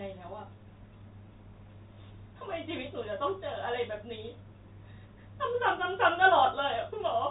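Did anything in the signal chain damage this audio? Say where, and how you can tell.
No, nothing in the chain has damaged this speech. It has passed through G.711 telephone coding, heard as a band limit with nothing above about 3.8 kHz and at most a faint level-following hiss, as expected of a 64 kbps mu-law telephone path.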